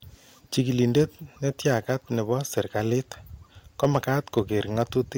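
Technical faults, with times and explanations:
3.84–4.40 s, hard clipping: speech peaks are driven about 4 dB past the limit and cut flat, adding harsh high harmonics heard as crackle on peaks.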